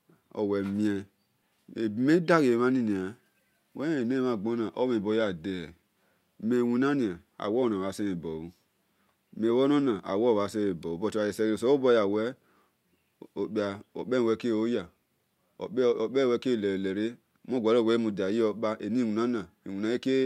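No technical faults can be heard anywhere in the clip.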